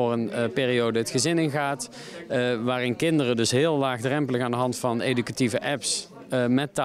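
No technical faults are audible.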